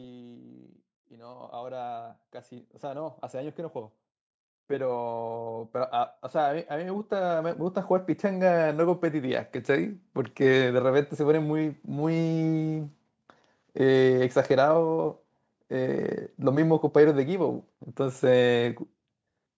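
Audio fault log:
0.4 to 10.04 s, automatic gain rising: the speech and the room noise behind it swell together, climbing steadily for nearly ten seconds until the level sits about 20 dB higher than at the start. The automatic gain control judged the incoming signal too quiet and kept turning its gain up in small steps. Because that gain acts on everything the microphone picks up, the background rises in step with the voice rather than staying put beneath it.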